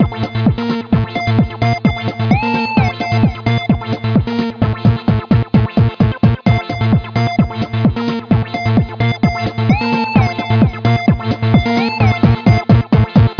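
Nothing is technically wrong with this audio.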